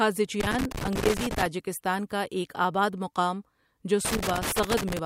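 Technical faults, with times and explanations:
0.40–1.46 s and 4.05 s to the end: loose connector crackle. A worn or dirty contact in the speech path is shifting and rapidly making and breaking, so the signal is chopped into fragments while any DC on the line turns each break into a pop. The result is an irregular burst of scratching crackle over the speech, first near the start for about a second, then again right after "ایک آباد مقام جو", running until the clip ends.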